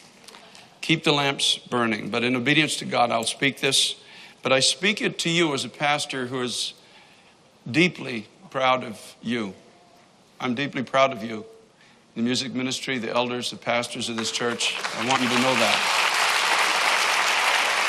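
At 15.16 s and again at 17.03 s, compressed frames were skipped. Whole frames went unplayed, so the audio jumps ahead, about two frames (roughly 40 ms) then about one, which fits a 21.3 ms frame. Each join is brief, seen as a vertical line and a waveform discontinuity.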